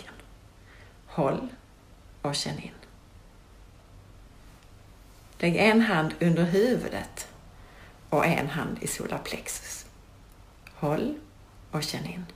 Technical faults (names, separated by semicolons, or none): sample clock jitter